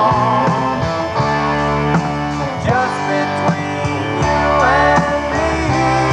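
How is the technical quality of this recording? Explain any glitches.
No glitches turn up anywhere in the recording. There is nothing technical here that calls for an explanation.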